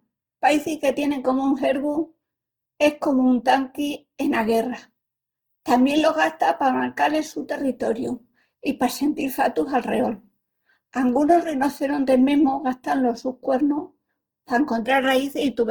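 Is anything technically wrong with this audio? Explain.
Yes. Opus compression damage runs through the whole speech clip and is plainly audible: the voice sounds rough and grainy, with a hissy, granular texture instead of clean tone. The likely cause is Opus in its music (CELT) mode at a low rate, fitting about 16 kbps. Starved of bits, the encoder preserves each band's energy but refills the fine detail with folded copies or noise. A spectrogram would show content reaching about 20.1 kHz, with smeared, speckled upper bands but few empty holes.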